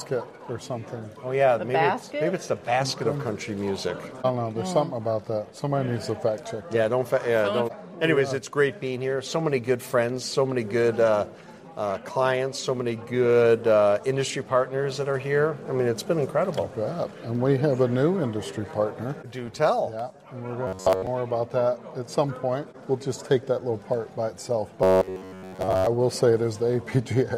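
From 20.67 to 21.07 s and again from 24.83 to 25.87 s, the sound turns into a rigid, metallic buzz at about 94 Hz that tracks the original only loosely. This is robotic sound from repeated short buffers, likely caused by audio arriving too slowly, so a fragment of roughly 10.7 ms is replayed in place of most of the missing material. That fixed repeat rate sets the buzz frequency.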